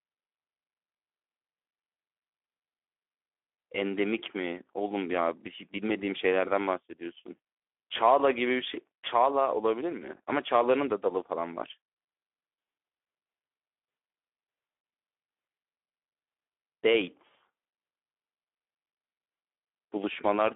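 From start to finish the speech sounds hoarse, buzzy and grainy, with nothing heard above about 3.8 kHz and a thin telephone band of roughly 300 Hz to 3.5 kHz. This is Speex codec damage: at about 11 kbps this CELP coder starves the excitation of bits, roughening every sound.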